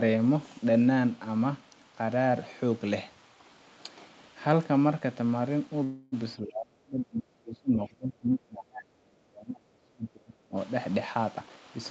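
From 5.83 to 6.14 s the sound stretches into a fading buzz, then resumes where it left off: a call audio freeze, likely from delayed packets draining the jitter buffer.

Between 6.39 and 10.57 s the speech dips, thins and breaks up, dropping by around 35 dB at worst. This is speech suppressed in double talk, likely from the echo canceller turning down this side's talker along with the loudspeaker echo.

From 11.35 to 11.85 s the speech rushes at unchanged pitch, about 135% speed. This jitter buffer speed-up removed roughly 200 ms to shrink excess buffered delay.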